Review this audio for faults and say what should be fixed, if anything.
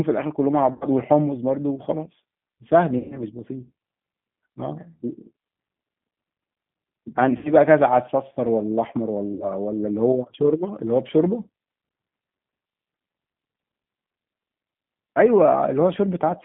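The whole recording carries G.729 codec damage, plainly audible as roughness and a synthetic edge. The 8 kbit/s coder rebuilds the voice from a filter, a pitch predictor and a few pulses per frame, and the line passes only about 150 Hz to 3.5 kHz. On a spectrogram, energy stops in a hard ceiling near 3.5 kHz, with smeared harmonics below. To prevent it, carry the call on a wideband or higher-bitrate codec such as G.722 or Opus.

VoIP packet loss concealed by the speech codec occurs at 0.73–0.85 s, 2.98–3.19 s, 7.37–7.55 s and 9.34–9.46 s, covering about 80, 120, 80 and 60 ms of missing audio. The decoder stretches its last pitch and filter into a buzzy tone or coloured noise that fades, and the sound stays weak or distorted afterward. On a spectrogram these spans show stretched, frozen spectra, and the waveform shows a decaying envelope. To prevent it, reduce network loss with QoS prioritisation and a suitably sized jitter buffer, or add forward error correction.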